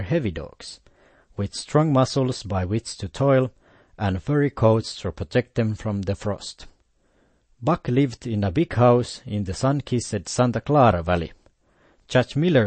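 MP3 compression, throughout: nothing above 8.4 kHz and plainly audible watery swirl on the speech, likely from MP3 encoding starved of bits, which fits a bitrate near 32 kbps.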